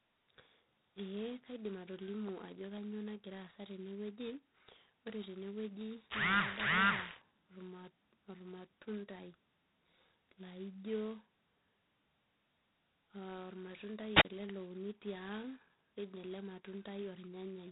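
Throughout the speech, G.726 ADPCM at 16 kbit/s, only two bits per sample of prediction error, leaves a harsh, rasping hiss that swells and shrinks with the speech level. A spectrogram shows a hard ceiling near 3.8 kHz, with grainy noise filling the band beneath.

From 14.13 to 14.25 s comes a wireless microphone squelch dropout. The radio signal fades, static briefly rises, then the receiver mutes for about 36 ms before "ele louni" returns. The waveform shows a short flat gap preceded by a burst of noise.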